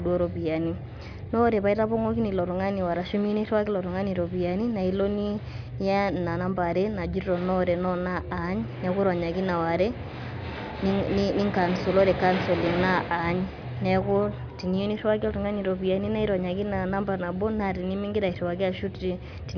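Nothing is technically wrong with this speech recording.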